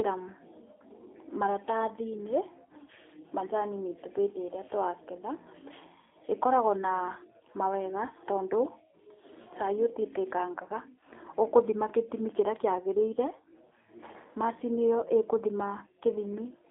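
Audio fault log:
Throughout, G.729 codec: the speech has been rebuilt by a low-rate model instead of carried as a waveform, which fits an 8 kbit/s stream. Each short frame keeps only a vocal tract filter, a pitch estimate and a few pulses, so the speech comes out plainly rough and slightly synthetic. Nothing reaches above 3.8 kHz and the telephone-line band runs from 300 Hz to 3.6 kHz, giving a thin, boxed-in sound with dulled consonants.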